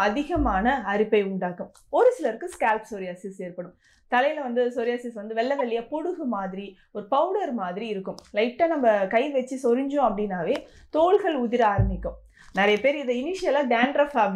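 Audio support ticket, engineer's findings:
Corrupt frame decoded: bit errors in a few compressed frames, played by the decoder without concealment. Misread gains and codes put energy at the wrong frequencies, giving short chirp/noise bursts at 5.59–5.61 s (peak around -20 dBFS) and 13.78–13.84 s (around -15 dBFS).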